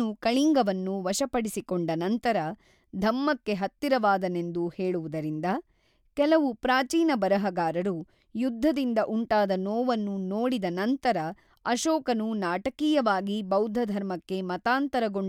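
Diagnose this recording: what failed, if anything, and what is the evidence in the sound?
Nothing in the chain has failed: the speech signal stays continuous and stable throughout, with no audible evidence of a fault at any stage.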